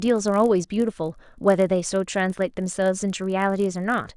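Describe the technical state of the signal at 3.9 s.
At 3.9 s the speech carries a filter restarted on every block, present across the whole clip: the filter loses its state and begins each 20 ms block from silence, leaving a 50 Hz buzz that tracks level. The waveform shows evenly spaced onset spikes; the spectrogram shows faint vertical lines every 20 ms.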